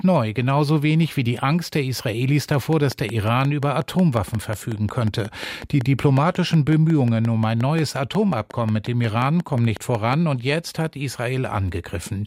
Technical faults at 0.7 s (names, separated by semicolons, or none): none